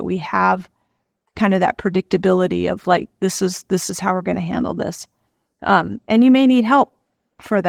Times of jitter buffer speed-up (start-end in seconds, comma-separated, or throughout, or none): none